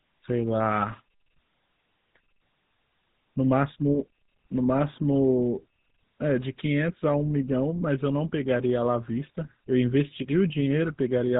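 It's a speech recording that's been through the GSM full-rate codec the whole way. Nothing comes through above 4 kHz, and the pulse-driven vocal-tract model leaves a plainly audible buzzy, gravelly roughness, which fits the old 13 kbps mobile codec.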